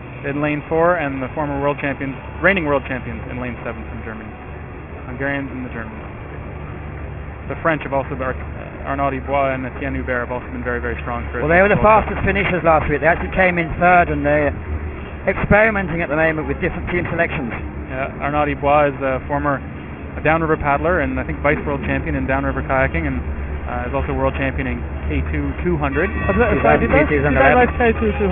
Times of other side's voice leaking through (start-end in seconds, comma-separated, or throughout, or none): none